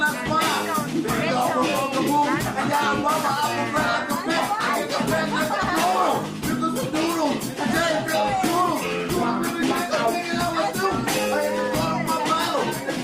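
At 3.53 s the adaptive stream drops to a lower bitrate and stays there to the end: artefacts rise abruptly, consistent with Opus stepping from 64 to 32 kbit/s.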